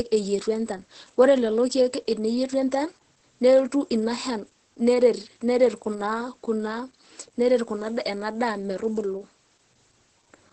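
Opus voice compression throughout: a low-rate linear-prediction coder removes everything above 8.2 kHz and coarsens the excitation, leaving speech muffled, hoarse and slightly robotic.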